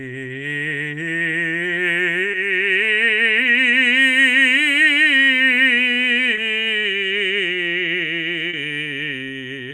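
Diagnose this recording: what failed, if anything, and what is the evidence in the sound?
The network stage failed, with short concealed packet loss at 2.31 to 2.35 s, 6.35 to 6.39 s and 8.49 to 8.55 s. Each time, 20 to 40 ms of music went missing and the decoder extended the preceding sound before blending back, giving brief smears rather than the silent gaps or sharp clicks of a plain dropout.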